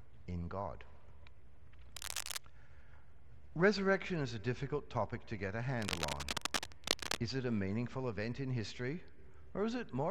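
Cable scratch noise rasps in at 1.95–2.38 s and louder at 5.78–7.17 s: uneven rustling bursts, not steady hiss, likely from a worn connector being moved.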